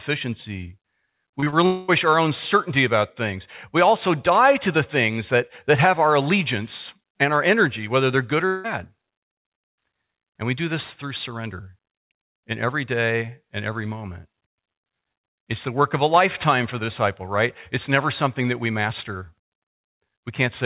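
Around 1.40 to 1.54 s, just before "our own certainty about", the speech smears and wobbles in three quick spots, at 1.40–1.44 s, 1.44–1.48 s and 1.50–1.54 s. This is short concealed packet loss: each time about 20 ms of the call arrived too late, and the receiver stretched the previous sound to cover the gap before blending back into real audio, leaving brief smudges rather than clean speech.

Close behind, from 1.66 to 1.90 s, still just ahead of "our own certainty about", the sound turns into a fading continuation of the last sound for about 220 ms instead of real speech. It never drops to silence, and the original audio in that gap is simply gone. The same thing happens at 8.46 to 8.66 s, right after "energy whether they're good", lasting about 180 ms. The likely cause is a long network dropout, where the decoder kept synthesising from the last sound until packets resumed. All of this sits inside a call-band signal with nothing above 4 kHz, consistent with a G.711-style codec.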